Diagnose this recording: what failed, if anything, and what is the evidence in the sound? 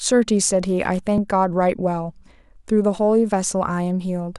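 The speech has two discontinuities, at 1.18 s and 2.98 s, where the sound jumps abruptly ahead by roughly 10 ms and 5 ms with no gap. That points to a likely dropped buffer (overrun) at the driver or buffer stage. The waveform shows a hard discontinuity, and the spectrogram a thin vertical broadband line.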